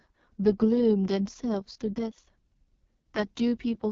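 A speech clip carrying heavy AMR wideband (HD Voice) codec damage throughout: rough, raspy texture consistent with the codec's lowest mode, near 6.6 kbit/s. A spectrogram shows a hard ceiling around 7.4 kHz, with smeared, noise-like energy above 6.4 kHz instead of clean harmonics.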